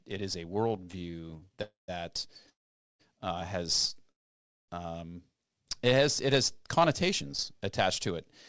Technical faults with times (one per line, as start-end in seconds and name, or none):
0.68-1.60 repeated stalls (stutter)
1.62-1.90 call audio freeze
2.49-3.01 call audio freeze
4.11-4.70 call audio freeze
5.49-6.27 jitter buffer slow-down
7.53-8.18 jitter buffer speed-up